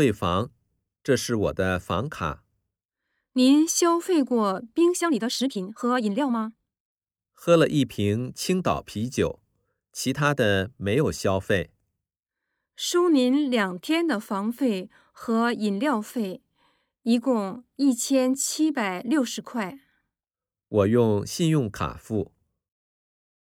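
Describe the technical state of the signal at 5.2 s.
At 5.2 s the speech sits inside a time-stretched section running from 4.95 to 6.85 s. Software likely compressed this stretch to fit a shorter length, playing it at about 1.66 times normal speed while holding pitch steady by discarding short slices of the waveform. The pace jumps abruptly at 4.95 s and returns at 6.85 s, and in between the speech sounds rushed, though its pitch is unchanged.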